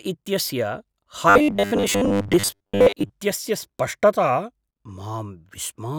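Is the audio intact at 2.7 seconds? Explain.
No. From 1.30 to 3.11 s there is robotic sound from repeated short buffers, likely caused by 10 ms chunks being replayed, forcing a rigid 100 Hz buzz. A spectrogram shows flat harmonic stripes at 100 Hz multiples, and the waveform shows identical repeating cycles.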